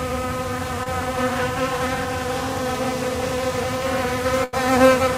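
A clip of sounds with two network faults. At 0.83 to 0.88 s, short concealed packet loss: about 20 ms never arrived, and the receiver extended the preceding sound to cover it, leaving a brief smear. At 4.44 to 4.55 s, a burst of packet loss: about 80 ms went missing, so the receiver stretched the last sound into a fading held tail before playback resumed further on.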